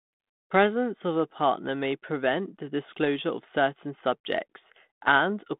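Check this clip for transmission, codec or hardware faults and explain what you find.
Nothing wrong turns up here; the speech comes through the way 32 kbit/s G.726 telephone audio normally does, sitting in the usual phone band of about 150 Hz to 3.6 kHz with just the light touch that codec leaves behind.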